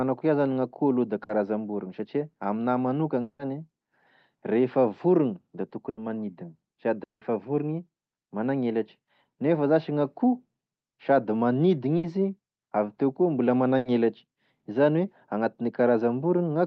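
Speech, carried over a call path whose Opus coding limits the top end to about 8 kHz, is broken four times by brief held buzzes or fading hisses at 1.23, 5.89, 11.97 and 13.77 s, the last right after "avy teo koa mbola". Each lasts 60 to 80 ms, and when the speech returns, an equal stretch is simply gone. This is a burst of packet loss: consecutive packets never arrived, so the receiver stretched and faded the last sound to fill the hole. Two longer breaks, at 3.21 s and 7.03 s, run about 180 ms as a fading buzz or hiss that falls to silence for the last 60 ms and 170 ms respectively, before the audio resumes further on with that portion missing. These point to a likely long network dropout, where nothing reached the receiver until its concealment gave out.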